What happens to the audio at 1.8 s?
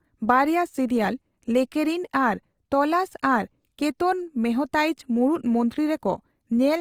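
At 1.8 s the speech sounds grainy and rough, with a noisy texture across the whole band up to about 20.2 kHz. That's likely Opus compression at a low bitrate, around 24 kbps, where thin bands are refilled with folded or noise content. It runs throughout the clip.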